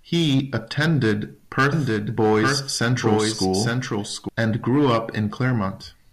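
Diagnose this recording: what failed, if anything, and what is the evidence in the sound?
From 1.73 s to 4.29 s the speech is heard twice: a second, full-band copy trails the original by about a second, roughly 5 dB quieter, with no reverb tail or room colouring, and it cuts in and out abruptly at those points. This is a doubled audio track, likely from the signal being captured a second time through a slower routing path or an edit leaving two out-of-step copies.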